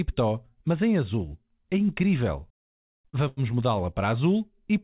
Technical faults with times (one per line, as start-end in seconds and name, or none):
2.54-3.40 repeated stalls (stutter)